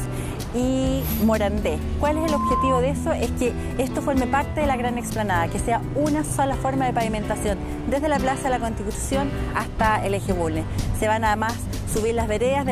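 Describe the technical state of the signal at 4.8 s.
The signal is intact at 4.8 s, with no audible fault at that moment.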